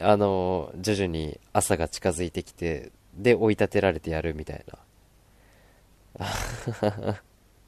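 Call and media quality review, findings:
Nothing stood out on listening to the speech in this clip.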